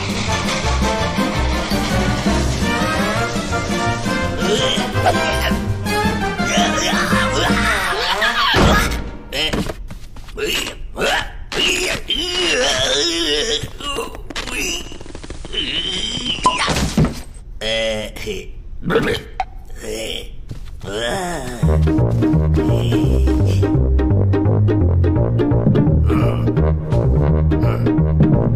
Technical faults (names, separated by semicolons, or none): digital radio blending to analogue